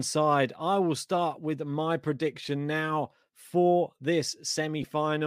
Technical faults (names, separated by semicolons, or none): lost LE Audio frames